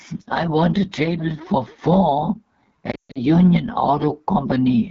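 From the first moment the speech carries the AMR wideband (HD Voice) codec at a low setting, and the damage is plainly audible. The coder models the vocal tract and drives it with pulses up to 6.4 kHz, then fills the band above that with shaped noise. At this rate there aren't enough bits to capture the excitation well, so the voice comes out rough and raspy. That roughness points to one of the lowest modes, most likely 8.85 kbit/s.

Right after "a table for four", from about 2.91 to 3.21 s, there's a stretch of lost AMR speech frames. About 200 ms of frames are missing, scattered across roughly 240 ms, with the longest unbroken gap around 140 ms. The decoder covers each gap by reusing the last good pitch and vocal tract settings at falling gain. In wideband that fade is quick, so the sound dips and drops to near silence within two frames, then comes back weak or rough for a moment.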